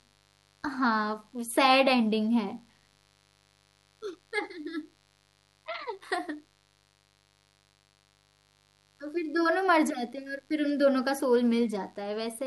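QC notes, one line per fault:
Throughout: mains buzz, a steady raspy buzz well below the speech, about 40 dB down, built from sharp switching spikes twice in every 50 Hz mains cycle with harmonics reaching into the kilohertz range.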